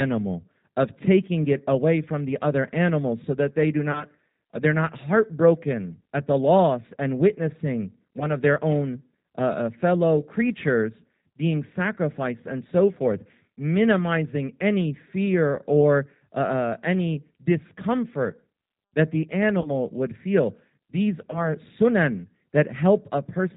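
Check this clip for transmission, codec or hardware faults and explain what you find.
Yes, two faults are audible: G.729 coding throughout this speech clip, and four short packet losses that the codec papered over.

G.729 codec (whole clip): the speech is rebuilt at 8 kbit/s from a vocal-tract filter, pitch predictor and sparse pulses, leaving nothing above 4 kHz and a plainly rough, synthetic grain. Unlike simple telephone band-limiting, the texture itself is coarse, not just dull.

VoIP packet loss concealed by the speech codec, at 3.92–4.04 s (after "so that they do", before "they're not heartbroken at"), 8.20–8.30 s (after "the loss and witnessing", before "of their own uh"), 19.61–19.71 s (after "any discomfort that the", before "would feel") and 21.31–21.46 s. The losses fit one to three 10 ms frames. The decoder extended its last pitch and filter at falling gain, so each spot turns into a brief buzzy tone or coloured noise that fades and recovers slowly, not the clean silence of a dropout.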